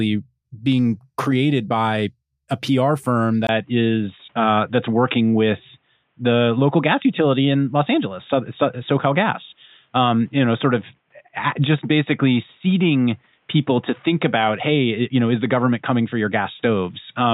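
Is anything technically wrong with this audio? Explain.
Yes. At 3.47 s the input most likely switched to a poorer device, and the rest of the clip comes through that narrower path. A short gap of about 20 ms marks the change, then nothing above 3.8 kHz survives, so the speech turns dull and boxy, losing its crisp upper detail. Loudness stays about the same, but a new, faint noise floor sits well beneath the speech, belonging to the new device rather than the original one.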